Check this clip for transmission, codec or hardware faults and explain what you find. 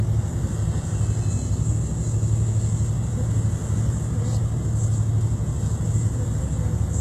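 One fault runs through the whole clip: low-bitrate audio saved at a high bitrate. Nothing is present above 12.3 kHz. The band simply stops there. What remains carries the artefacts of the earlier compression. A high-bitrate MP3 would not sound like this on its own. The likely cause is an earlier very low-bitrate encode, such as HE-AAC at around 16 kbit/s, later re-saved as a roomy MP3 near 256 kbit/s. The second encode cannot bring back what the first removed.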